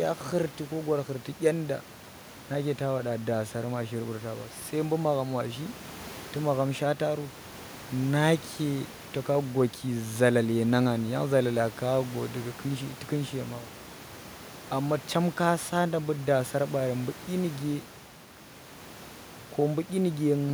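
Nothing in this speech recording stood out as a technical fault on listening, with the background room noise sitting about 20 dB below the speech.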